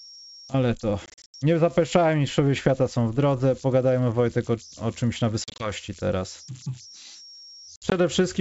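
Throughout the speech, the delta-sigma converter runs without dither, so whenever its input gets small it settles into repeating bit patterns. Those patterns produce idle tones, here a whistle around 5 kHz sitting about 23 dB below the signal. It is clearest in the pauses and turns into a grainy texture under the quieter passages, riding on top of the G.722 wideband band.

Packet loss on the ADPCM call hits three times. From 1.06 to 1.35 s, about 180 ms of audio goes missing in pieces spread over 280 ms, with the longest gap 80 ms, roughly ten packets. From 5.44 to 5.72 s, 100 ms is lost across 160 ms, with the longest gap 40 ms. From 7.76 to 7.94 s, 80 ms is lost across 160 ms, with the longest gap 60 ms. Each loss leaves sharp-edged silent holes. Because the decoder's predictor and step size drift out of step with the sender's, the speech comes back slightly distorted, then settles within a few tens of milliseconds.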